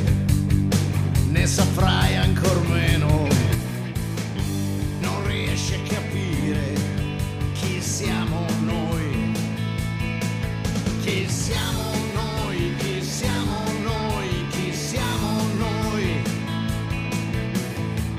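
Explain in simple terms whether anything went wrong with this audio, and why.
At 3.55 s the sound abruptly gets quieter and stays that way to the end, likely because one channel drops out. It is an instant step, not a gradual fade.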